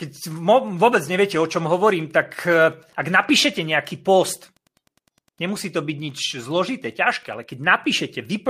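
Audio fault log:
Throughout: Wi-Fi interference. A steady faint ticking runs under the speech about ten times a second, set by a 102.4 ms beacon. A nearby radio's bursts are rectified in the audio circuit. The ticks sit far below the voice, roughly 45 dB down.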